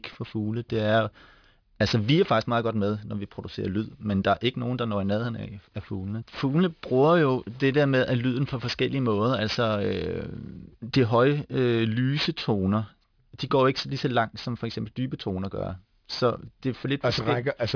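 Aliasing runs throughout the speech. Energy above 5.5 kHz folds back as gritty, metallic hiss on sibilants, fitting an unfiltered drop to 11 kHz.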